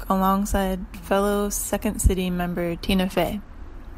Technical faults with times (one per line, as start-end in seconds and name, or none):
2.89-3.74 Bluetooth SBC bit pool drop